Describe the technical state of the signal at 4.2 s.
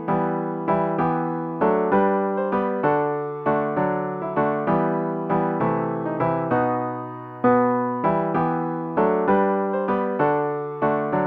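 At 4.2 s the signal is intact, with no dropout, click, distortion or other technical fault audible at that moment.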